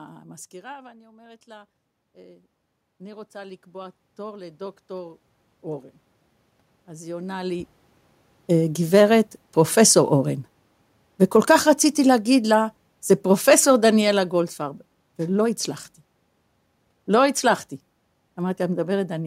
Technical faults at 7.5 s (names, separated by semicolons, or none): automatic gain rising